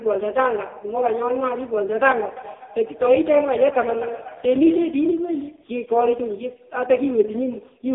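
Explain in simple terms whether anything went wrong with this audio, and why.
Yes, something went wrong, and it lasts the whole clip: the speech has been through the AMR narrowband mobile codec, the kind used on older phone calls. It keeps only a thin slice of sound, roughly 300 Hz up to 3.6 kHz, so the voice loses its depth and all its crispness. It was also squeezed very hard, which is why the speech sounds buzzy and robotic, like a phone model rebuilding the voice rather than recording it.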